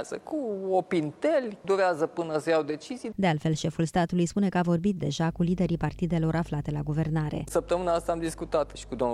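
A ground loop or nearby transformer couples the 50 Hz mains supply into the signal. From 5.28 s to the end, the audio carries steady mains hum roughly 20 dB below the programme.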